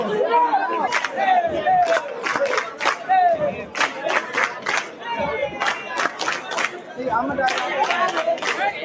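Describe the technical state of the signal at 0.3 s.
Noise suppressor applied to music or sounds, present at 0.3 s and throughout, treats held tones as noise, dipping them about 10 dB; the sound pumps.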